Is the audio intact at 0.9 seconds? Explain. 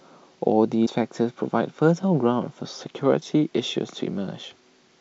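No. From 0.85 to 0.88 s there is a short glitch, and the audio skips ahead. This is likely a broken MP3 bit reservoir: after frames went missing, the next frame, about one 26 ms frame length, decoded borrowed bytes from the wrong frame.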